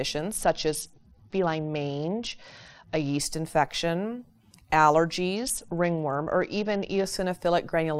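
Bluetooth SBC bit pool drop hits this speech clip twice, from 0.30 to 3.20 s and from 5.36 to 7.05 s: the treble dulls and gritty noise rises as the link starves the upper sub-bands and coarsens the rest, consistent with a bit pool falling from 28 to 8, roughly 72 kbps.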